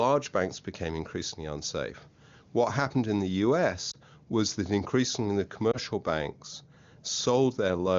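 A brief dip or warble interrupts the speech at 3.91 to 3.96 s, just after "happened in the", and again at 5.72 to 5.78 s, after "was that increasingly the". Each is a single lost AMR speech frame: one 20 ms frame failed its checksum, so the decoder briefly reused the previous pitch and vocal tract settings at lowered gain.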